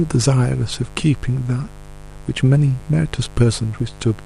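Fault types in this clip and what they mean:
Mains buzz: A steady, raspy buzz runs under the speech for the whole clip, sitting roughly 20 dB below it. Its fundamental is 50 Hz, but the harshness comes from a dense stack of harmonics of 50 Hz that climb well into the kilohertz range. That spectrum points to sharp switching spikes at twice the mains rate, as from a dimmer, a rectifier or an unshielded cable picking up interference from the supply.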